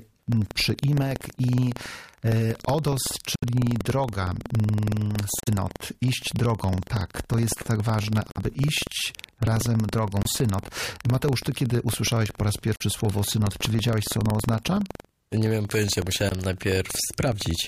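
Buffer tearing runs through the whole clip as a rattle at 21.5 Hz. Writer and reader cross each buffer, which fits 2048 samples. A small part of each buffer repeats audio from about 200 ms earlier.

Corrupt frames were muted at 3.36, 5.40, 8.30, 10.23, 12.76 and 16.29 s. Each is an abrupt silent hole of 44 to 90 ms. The first falls just before "droga mm", and the fifth sits between "kiedy usłyszałeś po raz" and "słowo synod czy wiedziałeś". The decoder rejected damaged frames, and silence replaced them without shifting the timing.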